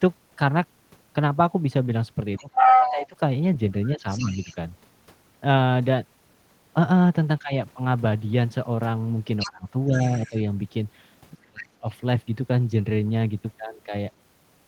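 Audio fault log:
2.37–3.07 s, 3.99–4.56 s and 9.39–10.34 s: other side's voice leaking through. A second voice comes in under the talker's speech, and it's actually a bit louder than the talker in the first stretch. In the second it's faint, well down in the background, and in the third it's somewhat quieter but still clearly there. It likely comes from the far end playing on the talker's loudspeaker and getting back into the mic because the echo canceller didn't fully remove it.
2.39–3.17 s, 3.94–4.56 s, 7.39–7.52 s, 9.45–10.35 s and 11.35–11.86 s: speech suppressed in double talk. In each of these the talker's voice sinks while the other side is talking. The drop is around 20 dB in the first, milder at about 10 dB in the second, around 15 dB in the brief third, about 20 dB again in the fourth and deepest at around 30 dB in the last. It's likely the echo canceller couldn't tell the talker from the echo and turned everything down.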